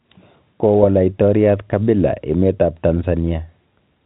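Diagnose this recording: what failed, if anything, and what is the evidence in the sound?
Nothing has gone wrong here, as far as I can hear; the speech has the ordinary narrowband character of a G.711 A-law telephone path at 64 kbps, with nothing above about 4 kHz, which is just how that link is meant to sound.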